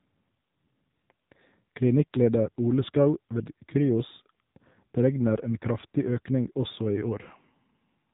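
From start to finish the speech carries AMR narrowband mobile codec damage, and it is plainly audible. The whole clip sits inside a telephone band, with nothing above 4 kHz, so sibilants and breath lose their top end. The codec rebuilds each 20 ms frame from a vocal-tract model excited by a sparse pulse train, and at a rate that points to the 7.4 kbps mode the result is a buzzy, synthetic voice.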